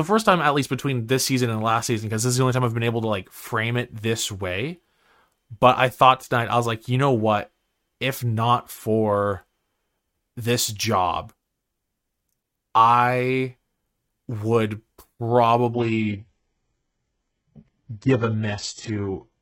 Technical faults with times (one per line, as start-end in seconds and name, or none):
15.73-19.41 adaptive stream at a lower bitrate